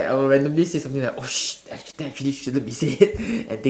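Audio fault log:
1.91–1.95 s, short concealed packet loss: about 20 ms of speech arrived too late to decode, so the receiver covered the gap by extending the preceding sound for roughly 14 ms before fading back into real audio. The result is a brief smear or wobble.
2.81–2.83 s, lost packet rebuilt from error correction: a single 20 ms packet was lost, and the decoder replaced it with the lower-quality backup copy carried in the next packet. There is no gap, but that moment sounds rougher and noisier than the surrounding audio.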